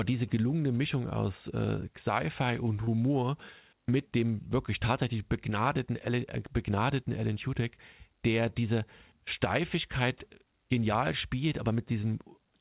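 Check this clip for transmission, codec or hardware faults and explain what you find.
One transmission fault is audible: a short concealed packet loss at 2.84 s, running to about 2.90 s. Roughly 30 ms of the speech stream did not reach the decoder in time, and the receiver covered the gap by extending the preceding sound, following its pitch where voiced or substituting shaped noise where not, before crossfading back into the real signal. The result is a brief smear or wobble. The call path itself is band-limited, with nothing above 4 kHz, consistent with narrowband G.711 A-law.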